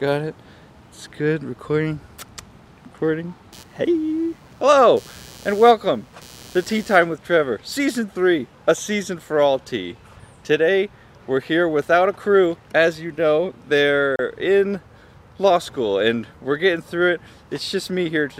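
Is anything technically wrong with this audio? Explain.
Yes, there are two faults.

Computer activity noise runs from 3.53 to 7.03 s. Processor, graphics or mouse load shifts the shared ground under the audio circuit, injecting a buzzing chirp that pulses around 150 times a second, sitting roughly 25 dB below the sound and tracking the machine's activity rather than the audio.

A digital broadcast dropout occurs at 14.16 to 14.20 s. The receiver got a corrupted or missing frame and muted until clean data resumed, so the sound cuts out for 32 ms, which fits the loss of a single frame. Whatever was transmitted in that gap is gone.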